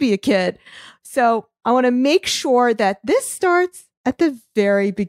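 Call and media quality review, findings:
Nothing to flag on this one; the speech comes through with no audible problems anywhere in the clip.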